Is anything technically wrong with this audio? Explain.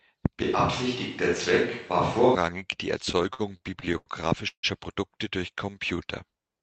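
Yes, there are four separate faults.

From 0.43 to 2.35 s the speech turns roomy and hollow with thinner bass and more background noise, sitting roughly 30 dB below the speech, though the level barely changes. This is a switch to a distant microphone, likely because the close microphone's signal dropped out and a farther pickup was used.

Between 3.05 and 4.08 s the speech drags and stutters through about ten brief hangs, the longest 82 ms, adding 247 ms in total, roughly a quarter of that stretch. These repeated stalls (stutter) come from packets arriving late, so the jitter buffer kept emptying and the receiver extended the last sound each time. Nothing is lost.

At 4.48 to 4.65 s the sound hangs on a fading buzz, then goes silent for 90 ms before resuming where it stopped. This call audio freeze adds 151 ms of delay with nothing missing, likely caused by packets held up in transit until the jitter buffer ran dry.

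From 5.54 to 6.61 s the speech slows to about 90% speed at unchanged pitch, with stretched sounds, adding 116 ms. This is a jitter buffer slow-down, where the receiver repeated single pitch periods and bits of pauses to rebuild its reserve. All of this passes through an Opus call path whose audio stops at 8 kHz, at a bitrate around 32 kbps.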